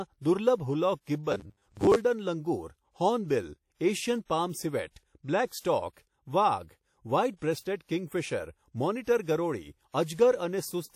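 Throughout the speech a plainly audible washy, ringing quality and a hiss that breathes with the signal sit over everything, with nothing above 17.7 kHz, likely WMA compression at a low rate fitting 48 kbps. From 1.32 to 1.97 s the speech turns into a rigid, metallic buzz at 100 Hz. This is likely robotic sound from repeated short buffers: 10 ms chunks are replayed while about half the real audio is skipped.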